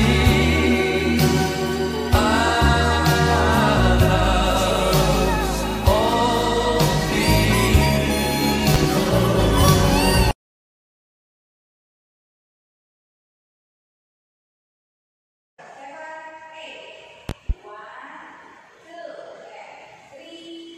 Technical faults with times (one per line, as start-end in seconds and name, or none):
8.74-8.86 loud pop
17.29-17.53 loud pop